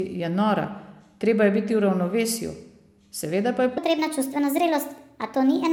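A likely clock mismatch during editing or playback leaves a section of this speech clip at the wrong speed. From 3.78 s to the end at 5.72 s, the audio runs about 1.35 times faster than it was recorded. Because speed and pitch shift together, the voice jumps up by about five semitones at that point and sounds hurried and chipmunk-like. Timing and pitch both change abruptly, with no gradual transition.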